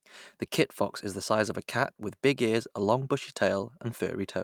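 No technical faults can be heard anywhere in this speech recording. The audio carries on without any break, glitch or sudden change in level.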